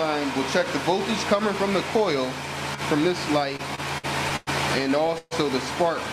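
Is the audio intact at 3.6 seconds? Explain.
No. At 3.6 seconds the audio is inside a stretch of repeated stalls (stutter), from 3.53 to 4.49 s. Packets arrived too late six times. The receiver stretched the last sound to cover 235 ms, the longest gap 107 ms. Nothing is lost, but it drags and stutters.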